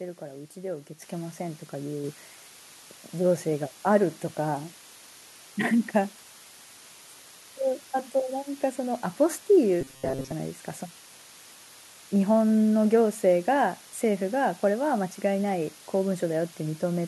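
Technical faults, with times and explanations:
Throughout: low bit depth with dither. A steady, even hiss sits roughly 20 dB below the speech, with no distortion. This fits about 7 bits per sample, where dither added before rounding turns the coarse rounding error into constant white noise.
1.02 s and 2.04 s: microphone volume stepped up. The speech and the background jump up in level together, by about 7 dB and then about 3 dB. Each change is an abrupt step in the device's input gain, not a gradual fade.
9.81–10.32 s: robotic sound from repeated short buffers. The speech turns into a rigid, metallic buzz at 133 Hz that still roughly follows the words. This is likely from the software repeating a 7.5 ms buffer while most of the real audio is skipped.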